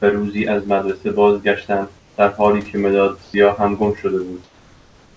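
Comfort noise in place of the background appears in this speech recording at 1.98–2.18 s, 3.24–3.34 s and from 4.44 s to the end. In each pause the room's natural hiss gives way to a flat, featureless noise, about 4, 2 and 3 dB quieter respectively. The likely cause is discontinuous transmission: the sender went silent when no speech was detected, and the receiver synthesised a rough stand-in for the background, over a call path that carries nothing above 8 kHz.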